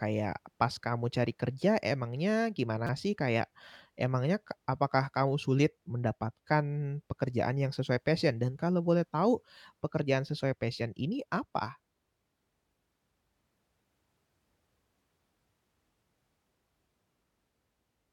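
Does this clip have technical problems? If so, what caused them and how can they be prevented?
Yes. At 2.87 to 2.89 s there is a brief buzzy click, where a tiny slice of the speech replays several times with a hard join at each repeat. This is a repeated buffer: fresh audio missed its deadline, so the device looped the last block. The roughly 6 ms period fits a 256-sample buffer, and almost no audio seems lost. Prevent it with larger buffers or higher processing priority so new audio always arrives in time.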